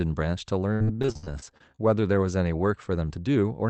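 From 0.73 to 1.80 s the speech breaks up into repeated packet loss (robotic sound). Twelve holes open in quick succession, the longest about 69 ms. Each is bridged by stretching the preceding sound, so roughly a third of that stretch is synthetic fill. The result is a choppy, robotic sound with bits gone. A single loss would leave one smeared blip. Here the concealment keeps restarting, which gives the mechanical, robot-like texture.

From 3.10 s to the end, a jitter buffer speed-up sets in. Audio had piled up beyond the buffer's target, so the receiver trimmed out tiny slices one or a few pitch periods long, again and again. Around 40 ms vanished in all. The speech runs about 5% fast and sounds hurried, yet its pitch stays put. That unchanged pitch is what separates it from a plain playback-rate error, which would raise the voice as well.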